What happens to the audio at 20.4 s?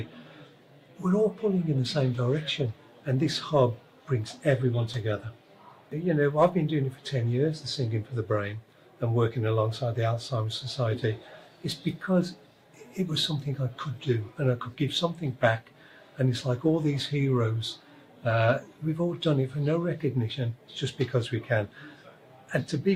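Nothing goes wrong at 20.4 s; the audio plays through that moment intact, with no dropout, click or other fault.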